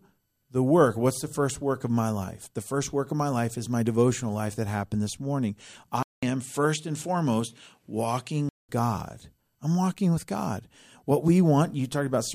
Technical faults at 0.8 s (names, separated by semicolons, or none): none